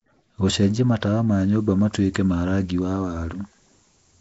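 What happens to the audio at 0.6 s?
At 0.6 s the speech sounds rough and hissy, with a smeared, underwater character and nothing above about 7.7 kHz. This runs through the whole clip rather than starting there. The likely cause is Nellymoser compression, the old Flash microphone codec, at a rate that fits 32 kbps. It codes short blocks with a fixed, small bit budget, so weaker bands get no bits and are filled with noise. That noise fill produces the hissy halo, and the blockwise coding smears the sound.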